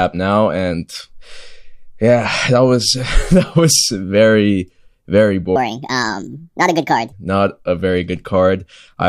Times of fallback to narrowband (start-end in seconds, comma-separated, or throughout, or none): none